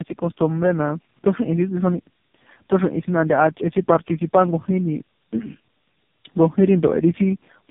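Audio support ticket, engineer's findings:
Tandem speech coding throughout: three narrowband speech codecs decoded and re-encoded in series, consistent with GSM full rate, then AMR-NB at low rates, with G.711 hops between. Each stage re-codes the previous one's artefacts. Result: rough, muffled, warbly speech, nothing above 3.7 kHz.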